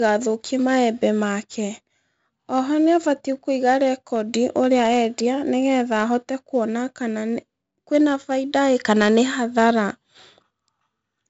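Throughout the recording, the speech has gone through 4-bit ADPCM compression: each sample was coded as a coarse 4-bit step from a predicted value, with the step size adapting as the signal changed. The coding error rides on the signal, so every loud syllable carries a heavy gritty hiss, and sharp onsets smear where the step lags behind. Nothing sounds above 7.7 kHz, leaving the speech dull, which fits a 64 kbps stream at a 16 kHz sample rate.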